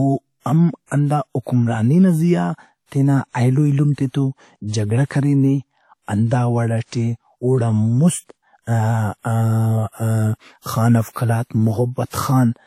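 From start to end, the speech carries plainly audible damage that sounds like WMA compression, likely at a low bitrate, which fits something near 48 kbps. Nothing is left above 16.4 kHz. Quiet spectral detail drops out, because weak spectral lines were zeroed. Quantisation noise smears over tens of milliseconds around each sound. The result rings and sounds washy. A hiss swells and fades along with the speech.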